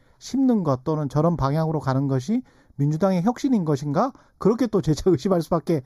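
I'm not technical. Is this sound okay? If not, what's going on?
No. Channel delay (comb filtering) runs through the whole speech clip. One channel arrives about a fifth of a millisecond late, and when both are combined, certain pitches cancel, starting around 3 kHz, leaving the voice hollow.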